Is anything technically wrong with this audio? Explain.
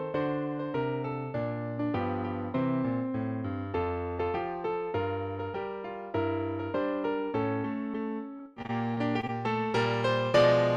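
Yes. From 8.37 to 9.30 s there is repeated packet loss (robotic sound). Eight short gaps, the longest 24 ms, are each patched by extending the preceding sound, so about 18% of that stretch is filled in. The result is choppy, with pieces missing, not a single dropout's one clean silence.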